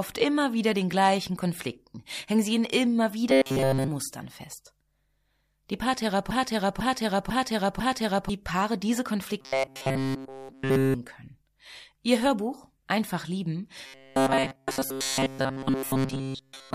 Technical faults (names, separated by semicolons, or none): robotic sound from repeated short buffers; broken-record loop